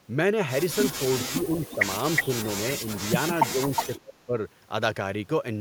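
From 1.2 to 1.43 s an echo leak appears: a delayed copy of the speech, trailing it by 365 ms and sitting about 10 dB below it. The likely cause is a speakerphone at the far end whose echo canceller failed to remove everything its microphone picked up, so the remainder was sent back. Overlapping this, from 1.29 to 1.58 s, the talker's speech is suppressed in double talk. It dips by only a few decibels, in short patches adding up to roughly a tenth of a second. The likely cause is the canceller failing to separate its own talker from the loudspeaker echo and turning both down.

The echo returns at 1.61 to 1.76 s at about 15 dB down. From 2.16 to 2.25 s it is about as loud as the speech itself. A brief, shallow dip follows at 2.27 to 2.36 s. A faint scrap of echo, about 20 dB down, comes at 2.44 to 2.49 s. The heaviest suppression runs from 3.52 to 4.38 s, where the speech falls away in pieces by up to about 30 dB for roughly half a second in total. 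Inside that stretch, from 3.76 to 3.98 s, the delayed copy again reaches about the level of the speech.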